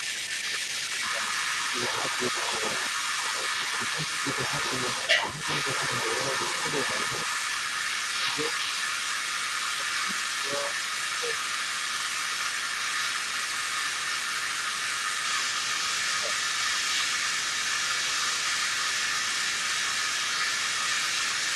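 A noise reduction stage set far too aggressively runs over the whole recording. It pulls individual frequency bands down or out wherever they resemble its noise estimate, and the softer parts of the speech go with them. The background drops and breaks up into twinkling specks. This is overdone noise removal.

Also present across the entire clip is what is likely an echo leak: a loudspeaker-side echo canceller failing to remove its own microphone pickup and sending it back down the line. The result is a delayed copy of the speech trailing the original by 156 ms, sitting around 5 dB above the speech itself.

The same canceller, likely confused when both ends talk at once, clamps down on the near talker along with the echo. This speech suppressed in double talk appears at 0.48 to 2.63 s, 3.78 to 4.87 s, 5.19 to 8.53 s, 9.55 to 16.37 s, 17.78 to 18.47 s and 19.39 to 19.92 s. The speech dips by roughly 10 dB, loses its top end or drops out in pieces. 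The deepest cut, near 15 dB, comes at 17.78 s, and the longest stretch of damage falls in the 9.55 to 16.37 s span.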